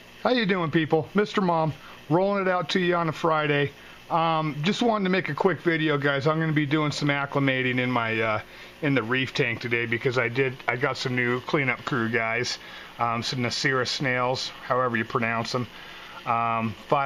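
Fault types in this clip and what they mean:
No faults found: nothing audible to flag at any point in the clip.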